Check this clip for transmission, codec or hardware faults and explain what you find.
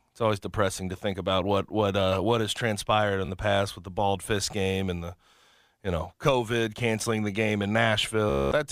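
The clip has one transmission fault, a Bluetooth stutter heard twice. The first event runs from 3.25 to 3.28 s and the second from 8.30 to 8.52 s. Audio packets failed to arrive in time, so the receiver kept replaying the last short slice of speech it held. The brief first gap loses about 29 ms and sounds like a quick flutter, consistent with a couple of missing packets. The second loses about 218 ms and becomes a buzzing, machine-gun repetition, which points to a longer run of lost packets. After each stutter the speech picks up further along, so the missing stretch is skipped rather than delayed.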